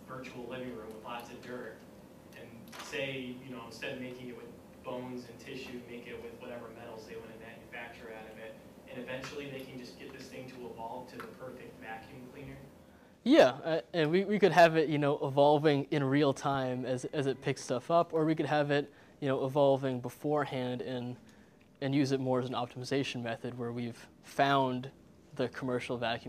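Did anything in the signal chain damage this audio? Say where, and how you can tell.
No, nothing in the chain audibly damaged this audio.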